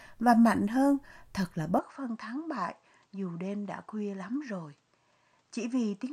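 An input switch to a poorer device at 1.79 s, just after "mạnh hơn thật là", changes the speech abruptly through to the end of the clip. The recording has likely moved to a different, lower-grade microphone path: from that point nothing is heard above 8.9 kHz, so the top end turns dull, the level drops by about 5 dB, and a new background noise sits roughly 40 dB beneath the speech. The change happens with no gap.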